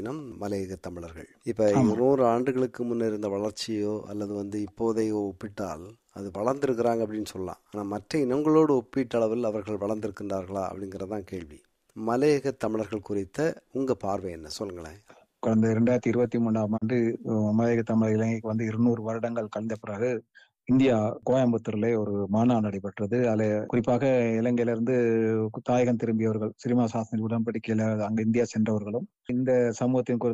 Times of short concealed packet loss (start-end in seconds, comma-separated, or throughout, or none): none